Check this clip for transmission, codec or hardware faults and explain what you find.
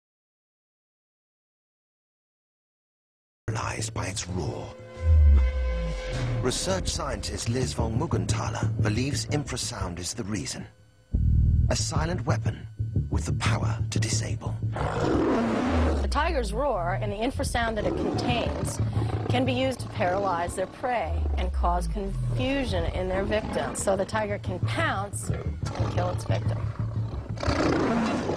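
One fault is present: an audio dropout to silence. From 0.00 s to 3.48 s the clip is silent, with no room tone at all. Sound then enters abruptly. The input was likely lost, through a disconnected device, failed link or mute, while the recorder kept writing silence.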